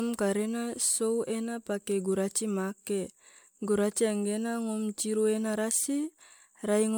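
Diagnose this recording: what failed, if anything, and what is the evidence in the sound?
Codec stage: generation loss is audible throughout the speech. The sound is swirly, smeared and hollow from start to finish, and consonant attacks are blurred, more than one encode at this quality would leave. The likely cause is repeated MP3 decoding and re-encoding, around four passes, which fits a 128 kbit/s chain. Each pass quantises on a shifted frame grid, so noise and spectral holes build up. A spectrogram shows patchy holes, smeared onsets and nothing above 20.1 kHz.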